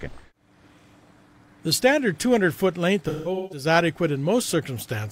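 From 3.08 to 3.66 s, AAC frame loss with concealment smears the sound. About 341 ms of frames drop out in patches, the longest near 150 ms. The decoder recycles the last good spectrum, giving a phasey, noisy blur. A spectrogram shows frozen, smudged bands, and the waveform sags briefly.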